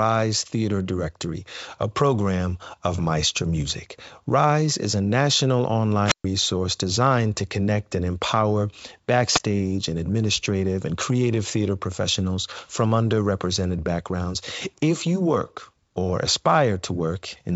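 At 6.05 to 6.25 s, after "is a national", a wireless microphone squelch dropout: the fading radio signal brings a brief swell of hiss before the receiver mutes for about 130 ms. It recurs at 9.33 to 9.40 s, before "and administrative and creative", with a 14 ms mute. Unlike a clean digital packet gap, each hole is heralded by rising static.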